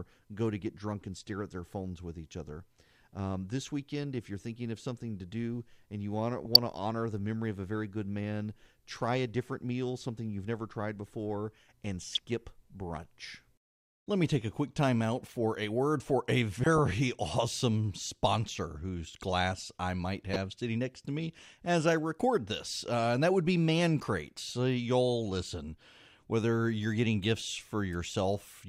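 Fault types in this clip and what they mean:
DAB burbling: reception bit errors corrupt MP2 sub-bands, causing brief blips of noise at 6.45, 12.09 and 20.33 s; unlike dropouts, the speech continues underneath.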